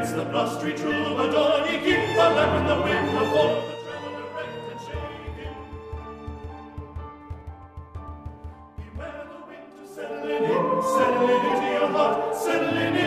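From 3.41 to 3.79 s the level drops by about 15 dB in a burst of zipper noise. Instead of gliding, the gain moves in coarse 1 dB steps at roughly 40 per second, and each jump leaves a small click, so a fast ticking rides on the sound as it falls. On a waveform the envelope descends as a staircase. A spectrogram shows faint vertical broadband lines at each step.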